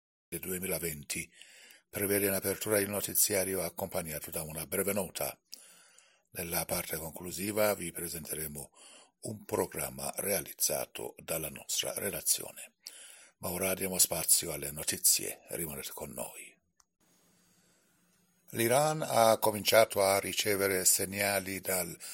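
From 0 to 0.32 s there is digital silence, then the sound starts abruptly mid-stream: a cut-off start, because capture began after the source was already playing. A waveform shows a flat line jumping straight into the signal, and a spectrogram shows a hard vertical edge with no attack.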